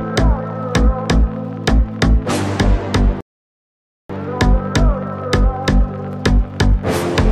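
A rebuffering stall interrupts the audio from 3.21 s to 4.10 s: playback drained its downloaded buffer and went silent until more data arrived, then resumed exactly where it stopped. No material is lost, but about 0.89 s of dead air is added.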